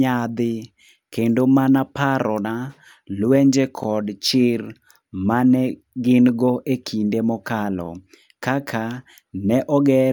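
At 3.84–3.86 s and again at 7.86–7.88 s you get a small stutter from overlapping chunks. The speech was handled in 4-second blocks that each start a little early, so about 23 ms gets played twice at every join, which comes across as a quick click.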